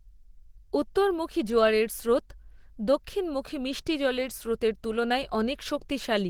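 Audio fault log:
throughout, Opus compression: the speech sounds muffled and hoarse, with a grainy, rough texture where the codec damage is plainly audible, even though content still reaches up to about 20.2 kHz. The likely cause is Opus running in its hybrid mode, where a speech-model layer handles the lower band and a transform layer with energy-preserving band filling covers the top. That fits a starved rate around 16 kbps, so detail is approximated rather than kept.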